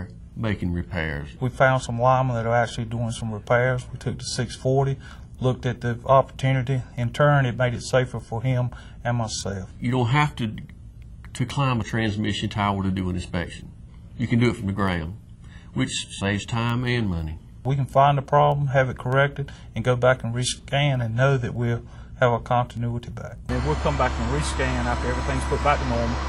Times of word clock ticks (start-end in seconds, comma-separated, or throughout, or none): 0.30-25.81